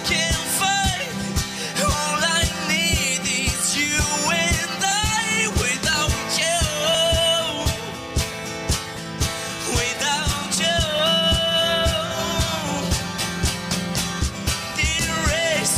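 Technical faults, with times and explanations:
4.92 to 10.99 s, periodic USB or driver dropouts: about seven short gaps land almost exactly 1.01 s apart. Each time, something in the system briefly stalls the USB bus or the audio driver, and around 10 ms of audio just gets skipped rather than padded with silence. The waveform jumps straight from one point to a later one, so each splice comes across as a small tick or pop. The even spacing is what points to a recurring background task.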